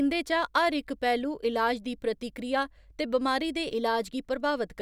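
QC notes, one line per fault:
No fault to note, so there is one line per fault and no lines.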